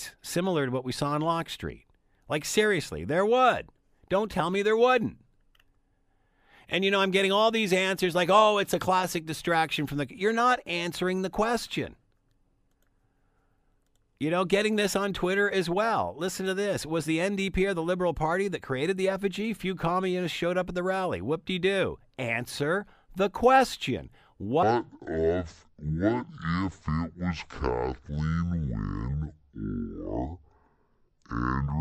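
From 24.63 s, just after "the question", to 31.81 s, a section at the wrong speed plays at 0.527 times normal. It sounds deep and slow, about ten semitones low, likely from a mismatched clock. A spectrogram shows harmonics shifted downward and stretched in time.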